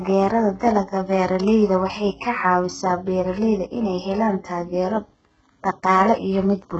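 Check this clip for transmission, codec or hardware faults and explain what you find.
One codec fault runs through the whole speech clip, most likely HE-AAC compression at a very low bitrate, consistent with roughly 8 kbps. Only the lower band is truly coded; the treble is rebuilt by spectral band replication from copied lower bands under a coarse envelope. Nothing sits above 8 kHz, the damage is heavy, and s sounds come out gritty, lispy and metallic because the rebuilt harmonics don't line up with the real ones.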